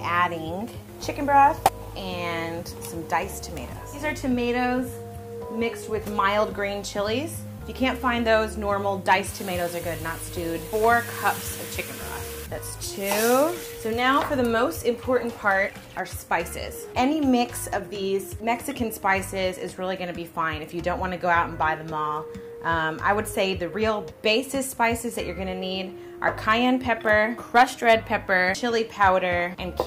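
Nothing technically wrong turns up anywhere in the audio.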